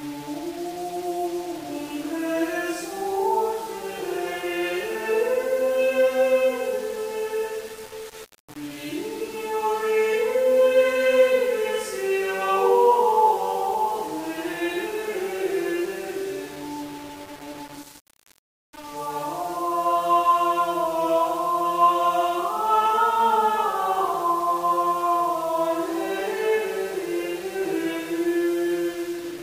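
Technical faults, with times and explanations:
Throughout, low bit depth without dither: the audio was likely reduced to about 6 bits and rounded with no dither, so the error tracks the signal, leaving grainy distortion only around 20 dB below it that roughens quiet passages and makes the faintest parts sputter or drop out.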